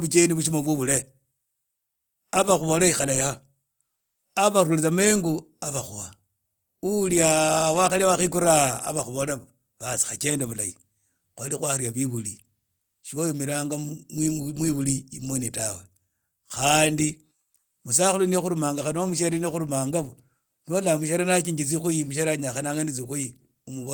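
No technical faults can be heard in this speech recording.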